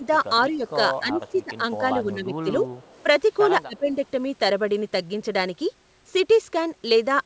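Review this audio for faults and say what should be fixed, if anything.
Speech suppressed in double talk: the level dips at 0.00–0.05, 0.52–0.76, 1.00–1.63, 2.03–2.66 and 3.65–3.97 s, mildly at first and deeply in the last one. The likely cause is an echo canceller ducking this side's talker along with the loudspeaker echo while they overlap. These show as waveform notches and faded spectrogram columns. A better-tuned double-talk detector or full-duplex settings would prevent this.

Echo leak: a very faint copy of the sound, delayed by 233 ms, appears at 1.28–1.44 and 2.78–3.03 s. It is likely loudspeaker pickup the canceller missed, and it shows as a weak, shifted smear on the spectrogram. Headsets or stronger residual-echo suppression would stop it.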